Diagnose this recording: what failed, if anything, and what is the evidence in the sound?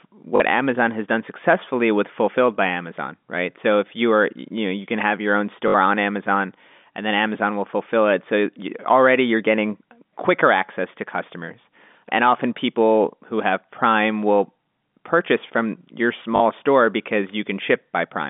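The fault sits at the network stage: packet loss with last packet repeated, at 0.36 to 0.40 s, at 5.68 to 5.74 s just after "can have your own", and at 16.36 to 16.40 s just after "will purchase from your". Each gap of 40 or 60 ms, which fits two or three 20 ms packets, was filled by replaying the last packet. The gap buzzes near 50 Hz. On a waveform these show as short identical blocks. A spectrogram shows the repeats inside the 200 Hz to 3.6 kHz telephone band of the G.711 line.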